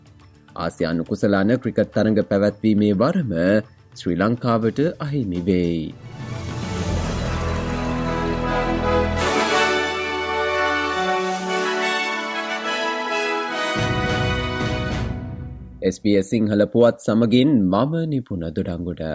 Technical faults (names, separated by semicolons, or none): none